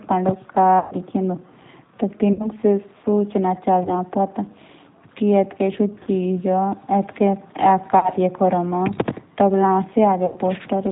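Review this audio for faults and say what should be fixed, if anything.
The whole recording carries G.729 codec coloration at 8 kbit/s. Speech is rebuilt from a vocal tract filter, a pitch predictor and a few pulses per 5 ms subframe, so the voice sounds rough and slightly synthetic, and nothing above 4 kHz survives. The top of the spectrum is missing, and the damage is plainly audible throughout. To prevent it, negotiate a wideband codec such as G.722 or Opus instead of G.729 wherever both endpoints support one.

VoIP packet loss concealed by the speech codec occurs six times: 0.79–0.96 s, 2.33–2.48 s, 3.83–3.89 s, 6.03–6.08 s, 7.99–8.10 s and 10.26–10.38 s. The missing stretches are 120, 60, 20, 40, 40 and 100 ms long. At each one the decoder keeps repeating its last pitch and filter at falling gain, producing a buzzy tone or coloured noise that fades. Because each frame builds on the previous one, the voice stays weak for a short time after audio resumes. 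To prevent it, fix the network loss and add forward error correction or redundancy and a jitter buffer.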